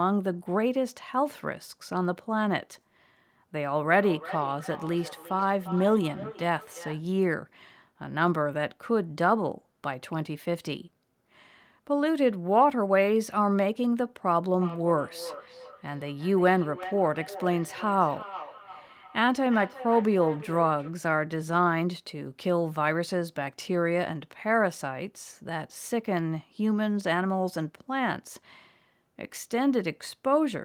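From 3.88 to 7.06 s, and again from 14.61 to 21.0 s, the speech comes back as feedback echo between two devices. Two devices in the same room share the call. One plays what the other's microphone sent, and that microphone hears it again. Neither echo canceller removes the other device's output. Each word returns roughly every 400 ms, thinner and ringier. The loudest repeats sit about 14 dB below the speech.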